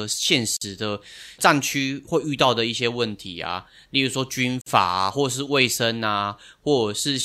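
Separately encoded pieces were joined without trimming the encoder's start delay and end padding, so a gap at a join of encoded pieces opens at 0.57 s and again at 4.61 s, four seconds apart. Each is a gap of about 48 to 49 ms cutting into the speech with smeared edges before it resumes where it stopped.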